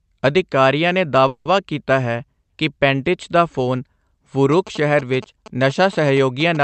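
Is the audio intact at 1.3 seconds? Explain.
No. From 1.27 to 1.47 s there is a call audio freeze, likely caused by packets held up in transit so the jitter buffer ran empty. The receiver keeps the last sound going as a fading buzz or hiss for about 180 ms. Unlike a dropout, nothing is lost: the audio resumes exactly where it stopped, just 180 ms later, so a gap is inserted rather than content cut. The surrounding call audio is band-limited to about 8 kHz.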